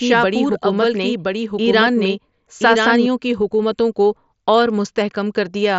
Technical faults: doubled audio track

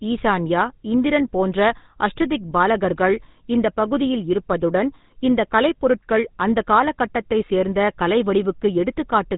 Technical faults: GSM full-rate codec

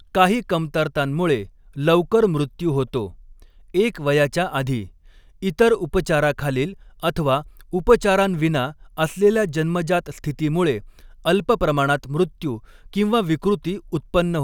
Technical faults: none

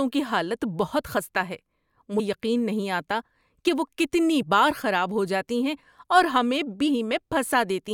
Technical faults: damaged data in a compressed stream

